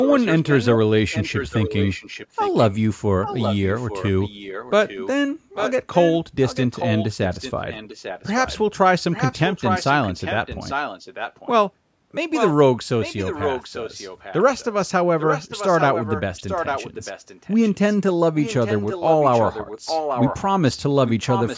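From 0.01 to 8.58 s, 9.12 to 11.49 s and 12.32 s to the end, a delayed copy of the speech trails the original by about 0.85 s, heard as a repeat. It sits about 10 dB below the direct speech in the first two spans and rises to about 5 dB below in the last. This is echo leak, likely from a far-end loudspeaker whose echo canceller failed to suppress the returning signal.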